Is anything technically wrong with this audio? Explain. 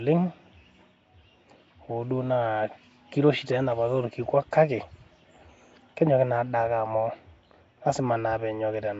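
Yes. Throughout the speech the audio carries a rough, hissy halo and a smeared, underwater quality, and nothing is present above 7.7 kHz. This is likely Nellymoser compression, the old Flash microphone codec, at a rate consistent with about 32 kbps. It codes short blocks with a fixed, tight bit budget, so weak bands get no bits and are refilled with noise. On a spectrogram, expect a hard ceiling at 7.7 kHz and grainy, speckled noise filling the gaps between harmonics.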